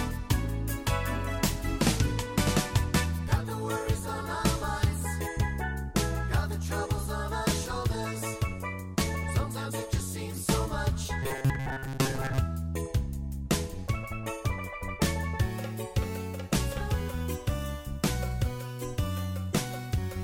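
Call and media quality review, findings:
Robotic sound from repeated short buffers, 11.23–12.39 s: metallic 134 Hz buzz; most audio replaced by repeats of a 7.5 ms block, likely playout buffer underrun.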